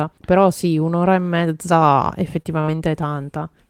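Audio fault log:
2.42–2.78 s, repeated packet loss (robotic sound): the speech turns choppy over this stretch. Four short holes open in quick succession, the longest about 24 ms. Each hole is papered over by stretching the sound just before it, about 56 ms of patching in all, while about 40 ms is simply lost. Roughly a sixth of the span is concealed this way. The missing pieces make it stutter.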